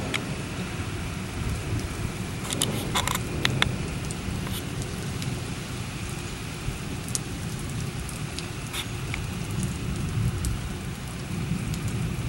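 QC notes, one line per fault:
2.05 s and 9.17 s, dropped buffer (overrun): at each point the sound jumps forward with no gap of silence, as if a slice of roughly 40 ms had been removed and the two sides butted together. The likely cause is an overrun: the capture side did not read its buffer in time, the hardware overwrote it, and that block of samples was lost.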